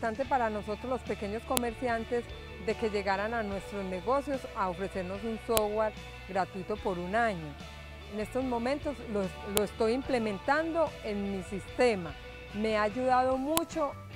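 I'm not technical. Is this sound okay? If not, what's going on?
No. There's a fault called a file header played as audio, heard as a sharp click or snap at 1.57, 5.57, 9.57 and 13.57 seconds, exactly every 4 seconds. The sound was joined together from separate 4-second pieces, and each piece began with a short block of file information that should have been stripped off. Instead it was played as sound, so each join snaps, no matter what the audio is doing.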